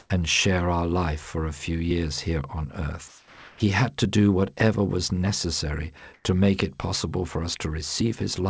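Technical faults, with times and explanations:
0.00–0.10 s, 3.08–3.60 s, 6.14–6.24 s, comfort noise in place of the background: in the pauses before "and share our life", after "few years here on" and after "do whatever was necessary", the real background turns into flat, detail-free hiss, about 4 dB louder, 2 dB quieter and 5 dB louder. The likely cause is that discontinuous transmission stopped sending audio and the receiver generated noise to fill each gap.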